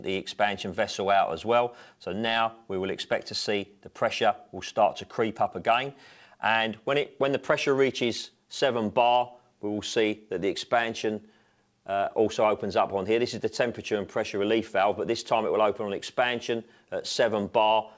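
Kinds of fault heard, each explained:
No faults can be heard in this clip. It has passed through a working call path, and the band-limited quality, with nothing above 8 kHz, fits a G.722 link at 64 kbps.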